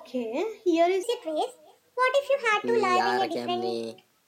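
Throughout, an echo with no canceller trails the speech. A faint copy, about 28 dB down, returns roughly a third of a second later, sounding thin.

From 1.03 s to the end, the section runs at the wrong speed. It plays 1.27 times too fast, raising pitch about four semitones, likely from a clock mismatch.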